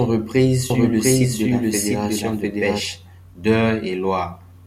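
A speech recording with a doubled audio track from 0.70 to 2.80 s: a second, equally loud copy trails about 0.7 s behind, dry, and cuts in abruptly, likely a slower capture path.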